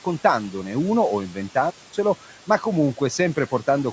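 Noise suppressor artifacts run through the whole speech clip. The suppressor estimates the steady room noise frame by frame and pulls those bands down by about 12 dB. The background, sitting about 19 dB under the speech, sinks in the gaps and rises again beneath the speech. The call microphone processing caps the band at 8 kHz.

Speech cut by the noise suppressor happens twice. From 1.29 to 1.56 s, right after "uno o", the suppressor misjudges soft speech energy as noise and turns it down by up to about 9 dB for roughly a tenth of a second, so the sound there seems swallowed. From 2.25 to 2.63 s the same misclassification returns with a drop of up to about 10 dB over a similar short stretch, leaving that moment faint.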